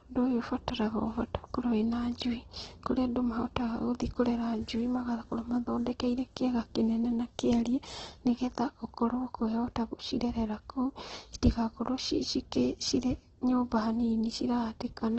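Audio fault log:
Throughout, Opus compression: likely a starved Opus encode in music mode, fitting about 12 kbps; speech turns grainy and rough, with nothing above 8.2 kHz.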